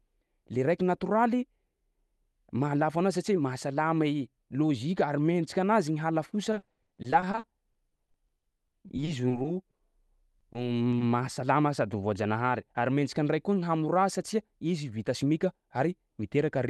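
Speech with repeated packet loss from 6.51 to 9.81 s and again from 10.39 to 11.03 s. Dozens of short holes, none longer than 60 ms, are patched by stretching the last sound, producing choppy, robotic speech rather than the single clean silence of an isolated dropout.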